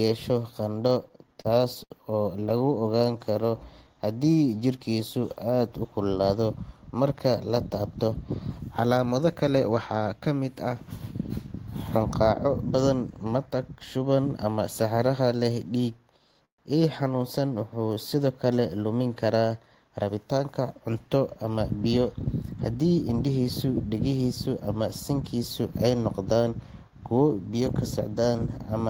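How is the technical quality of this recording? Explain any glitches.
The recording has network delivery problems throughout: a stuttering stretch near the start, a slowed passage, three sped-up passages and a brief freeze.

From 0.87 to 2.82 s there are repeated stalls (stutter). Packets kept arriving behind schedule, so the jitter buffer emptied sixteen times, and each gap was bridged by continuing the previous sound, the longest for 69 ms. About 249 ms was filled, roughly 13% of that span, and nothing was lost. The speech drags and hiccups. On a spectrogram the harmonics repeatedly flatten into short, smeared, frozen columns. In the waveform, repeated cycles with small dips appear where fills fade.

From 2.97 to 3.95 s, just before "haddii jirkiisu aad", there is a jitter buffer slow-down. With a low reserve, the receiver repeated individual pitch periods to add 104 ms, so this stretch plays at 90% speed without any change in pitch. 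Syllables sound stretched. A spectrogram shows elongated harmonic bands at unchanged spacing, and the waveform shows runs of near-identical repeated cycles.

There are three jitter buffer speed-ups, where the buffer held surplus audio and the receiver cut out short pieces of one or a few pitch periods to shrink the delay. From 5.98 to 6.77 s, just before "marka la", speech runs at 110% and about a tenth of a second is removed. From 13.26 to 14.07 s it runs at 107% with around 70 ms removed, and from 20.02 to 21.93 s at 107% with around 150 ms removed. Each passage sounds hurried at normal pitch. On a spectrogram the syllables look compressed in time with harmonic spacing intact, and the waveform shows slightly abrupt joins between cycles.

From 16.45 to 16.60 s there is a call audio freeze, likely caused by packets held up in transit so the buffer ran dry. The last sound is carried on briefly, then about 110 ms of near-silence follows before speech resumes exactly where it stopped. 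A 134 ms gap is inserted and nothing is missing. The spectrogram shows a brief smear fading into a blank vertical band, and the waveform shows a decaying tail followed by a flat segment.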